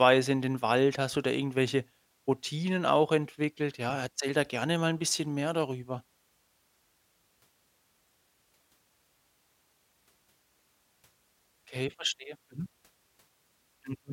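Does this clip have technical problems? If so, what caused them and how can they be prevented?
No, this clip has no technical problems, so there is nothing to trace to a cause or prevent.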